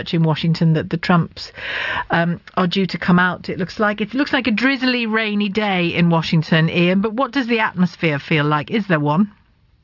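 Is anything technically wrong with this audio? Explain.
No, nothing technical stands out here; the sound carries on steadily with no glitches or interruptions to point to.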